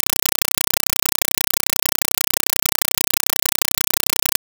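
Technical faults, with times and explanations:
Throughout: compressed stream played as audio. Loud chattering static replaces the music, with 5.3 ms bursts 31 times a second from undecoded Dolby Digital data, which fits a 256 kbps stream.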